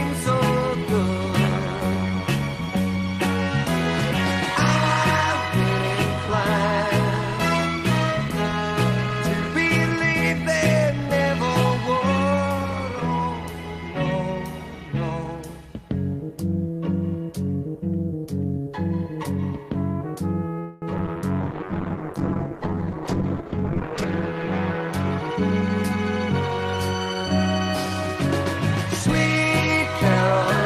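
Call audio freeze, 20.59 to 20.85 s. For about a quarter of a second the sound stops moving forward: the last sound is stretched into a buzzy tail that fades, filling roughly 225 ms. When the sound resumes, it continues from where it halted, so nothing is lost, but everything after is pushed about 225 ms later. The likely cause is packets delayed in transit, leaving the receiver's jitter buffer empty until they arrive.

Repeated packet loss (robotic sound), 20.98 to 21.23 s. Right after the freeze, packets go missing several times in quick succession. There are four short holes, the longest about 10 ms, and each is patched by briefly extending the preceding sound. Because the patches come so close together, this quarter-second turns choppy. About 160 ms of material is simply absent, which gives the stretch a clipped, broken texture.

Call bitrate drop, 21.44 to 25.66 s. The connection's bandwidth estimate falls and the encoder is forced to spend far fewer bits. 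The sound fits a drop from about 40 kbps to about 9 kbps, staying at the bottom for roughly 2.7 s. At that rate Opus codes coarsely and discards the upper frequencies. The result is muffled, watery and rough, and it stays that way until about 25.7 s, when the brightness and detail return.

Jitter buffer speed-up, 22.93 to 23.46 s. This overlaps the low-bitrate stretch. The buffer is holding more audio than it aims to, so the receiver trims it by cutting out tiny pitch-period-length pieces many times over. Around 50 ms disappears across half a second. The sound plays about 7% fast without any change in pitch, so it comes across as briefly hurried.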